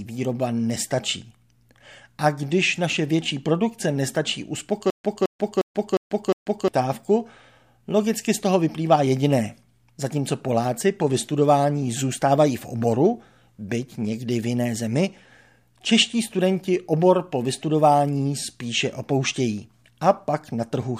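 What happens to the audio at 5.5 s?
At 5.5 s the speech is in a stutter with silent gaps, running 4.90 to 6.68 s after "naše větší produkce nestačí". A 216 ms fragment repeats five times, each followed by about 140 ms of digital silence, a 356 ms cycle, likely from a stalled stream replaying its last buffer.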